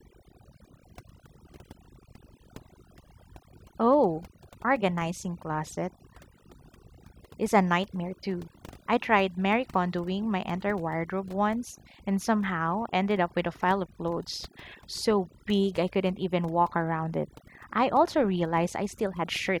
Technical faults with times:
0.00-19.60 overdone noise removal

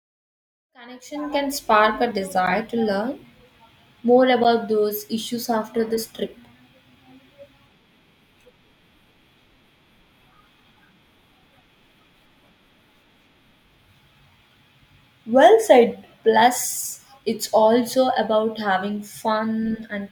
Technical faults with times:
2.46 block of digital silence
4.44 block of digital silence

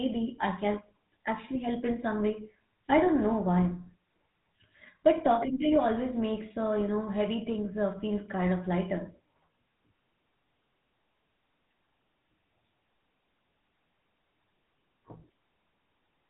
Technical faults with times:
0.00-16.30 GSM full-rate codec

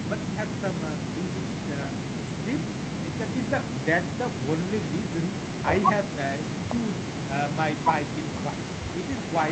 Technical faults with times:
none

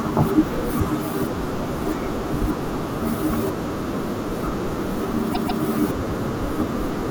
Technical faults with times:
5.32-5.61 repeated frames

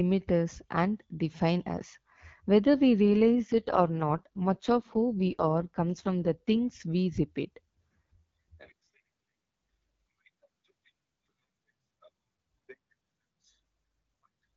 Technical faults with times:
3.02-6.57 AMR rate drop
8.61-10.90 AMR rate drop

